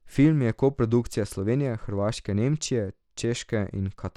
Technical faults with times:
0.00-4.17 Bluetooth SBC compression

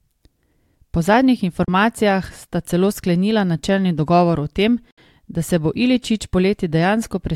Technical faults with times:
1.64-1.68 digital broadcast dropout
4.91-4.98 digital broadcast dropout

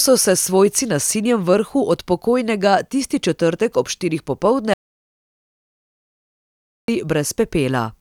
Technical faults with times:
4.74-6.88 audio dropout to silence

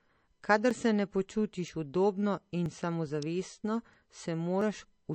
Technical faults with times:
0.00-5.15 MP3 compression
0.71 audio missing between chunks
1.68 audio missing between chunks
2.66 audio missing between chunks
3.22 electrical switching spike
3.64 audio missing between chunks
4.61 audio missing between chunks

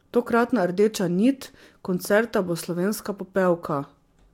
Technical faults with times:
none

